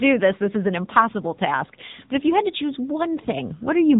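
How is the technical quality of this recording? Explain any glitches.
The recording has audible damage from the AMR narrowband mobile codec, present for the whole clip. Nothing above about 3.8 kHz survives. The codec rebuilds the voice from a vocal-tract model driven by a few pulses per short frame, and the buzzy, synthetic edge on the speech points to a low rate of around 8 kbps. That buzz is what separates it from simple telephone band-limiting, which would muffle the speech without making it sound artificial.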